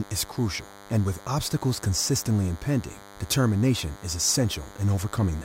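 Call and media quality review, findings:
Steady, thin buzz under the speech, start to end, bright with many harmonics, roughly 20 dB below the talker. DECT cordless phone buzz. Probable component: analogue mic or preamp stage near a DECT handset or base. Mechanism: radio bursts every 10 ms rectified in the audio circuit, giving a 100 Hz buzz.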